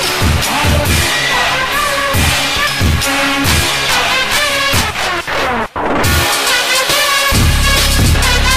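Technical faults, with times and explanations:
2.67 s, 7.32 s and 8.15 s, compressed frames skipped: at each point the audio jumps forward by roughly 0.7 s, with material missing rather than silenced. A chunk that size fits about ten compressed frames of about 92.9 ms each being dropped or refused by the decoder. On a waveform the envelope changes abruptly with no gap. On a spectrogram the harmonic and texture patterns break off and resume mismatched at a sharp vertical seam.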